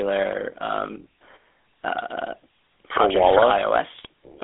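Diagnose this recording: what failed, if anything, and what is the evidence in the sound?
The whole clip has gone through the GSM full-rate codec, so this is a codec-stage fault. The speech has that buzzy, gravelly roughness from start to finish, and the band is squeezed to roughly 300 Hz to 3.6 kHz. The coder models the vocal tract and drives it with a sparse, regularly spaced pulse excitation instead of the real waveform. That throws away fine detail and leaves the grainy texture, which fits a 13 kbps GSM full-rate stream.

Near the end, from 3.94 to 4.06 s, you get GSM bit errors: a short burst of squawky, gargling breakup. That's a network-stage problem, with corrupted bits on the radio link reaching the decoder. When the filter, pitch or gain values arrive damaged, each affected frame decodes with a warped spectrum or a jump in level. The length of the burst points to about six frames being hit in a row.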